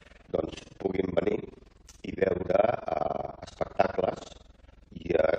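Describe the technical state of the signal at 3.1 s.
At 3.05 s there is a compressed frames skipped event: the decoder drops whole frames, so the sound jumps ahead by around 50 ms, consistent with about two frames of 23.2 ms.

Overlap-add ripple is also present across this moment and the whole clip. Windowed frames are recombined with an overlap that does not sum to constant gain, so the level swings by about 60 dB around 20 times a second, producing a rough tremolo.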